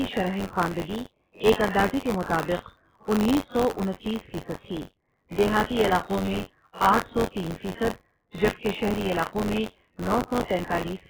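Right from the start the whole clip sounds watery and swirly, with weak detail flickering in and out. That's likely heavy MP3 compression at a very low bitrate, where the encoder chops the treble and drops quiet frequency lines frame to frame.

There's also a robotic buzz at 93.8 Hz riding on the speech for its whole length, which fits a 512-sample buffer. That's buffer tearing. The writer and reader of the ring buffer have drifted, so a small slice of each period replays audio from a few tens of milliseconds earlier, with hard joins.

Around 1.53 to 1.57 s, a sharp attack gets a short smear of hiss in front of it, spread over about 43 ms, and the onset itself sounds softened. That's pre-echo: the codec's noise, sized for the loud hit, fills the quiet gap just before it.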